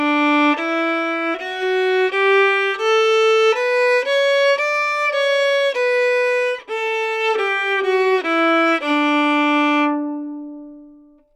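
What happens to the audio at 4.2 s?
Nothing goes wrong at 4.2 s; the sound carries on intact through that moment, with no dropout, click or other fault.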